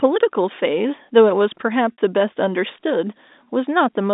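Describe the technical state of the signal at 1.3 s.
At 1.3 s the speech is intact, with no fault present, only the narrow band-limited sound of the G.711 telephone coding on this line.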